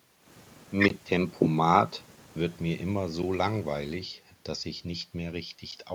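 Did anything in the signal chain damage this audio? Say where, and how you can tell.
No, nothing damaged this audio.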